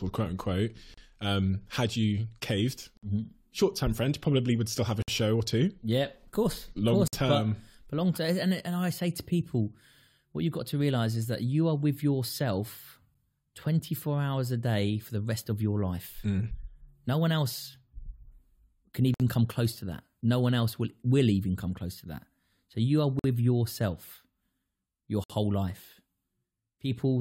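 Gaps between stream segments cut hard-edged silences into the speech at 0.94–0.98, 2.97–3.03, 5.02–5.08 (between "would still have a" and "show or two"), 7.08–7.13, 13.14, 19.14–19.20, 23.19–23.24 and 25.24–25.30 s. Mismatched time stamps on a 2 s segment grid leave holes of 8 to 58 ms, which playback fills with silence. No audio is lost.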